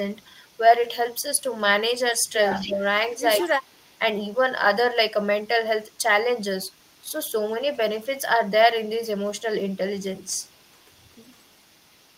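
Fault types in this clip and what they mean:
Echo leak: 0.1 to 1.61 s, 2.5 to 4.39 s, and 5.21 s to the end. A copy of the speech returns 160 ms behind the original. This is likely a far-end loudspeaker whose echo canceller let some of the microphone pickup slip back into the call. In the first and last stretches the copy is faint, roughly 35 dB down. Between 2.5 and 4.39 s it is much stronger, only about 15 dB below the speech.
Speech suppressed in double talk: 2.59 to 2.84 s and 3.42 to 3.89 s, inside the strong echo stretch. The main speech sinks in level, by about 10 dB in the first dip and about 20 dB in the second. Each dip lasts only a fraction of a second. With both sides sounding at once, the echo canceller apparently could not separate the near talker from the returning echo and turned everything down together.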